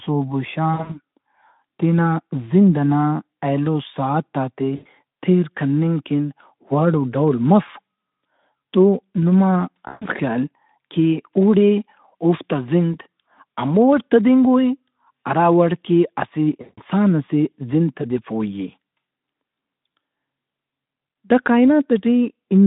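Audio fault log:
0.74–0.98 s, 4.75–4.86 s, 9.87–10.08 s and 16.61–16.79 s: VoIP packet loss concealed by the speech codec. About 120, 100, 140 and 160 ms of audio go missing. The first loss is scattered over 160 ms in runs of up to 60 ms, and the second falls between "ئنا ایلو ساعتات ئے" and "تیر کننگ کن وڑ". The third follows "تو نما", and the fourth comes just before "ئسے زند". Each time the decoder of this narrowband Speex link (about 150 Hz to 3.7 kHz) keeps repeating its last pitch and spectral shape while turning the gain down. The gap therefore sounds like a smeared, buzzy tone or coloured noise that fades out. Because each rebuilt frame feeds the next one, the sound stays weak or distorted for a short time after packets start arriving again.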